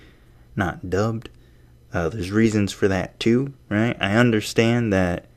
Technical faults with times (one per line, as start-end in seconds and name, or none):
none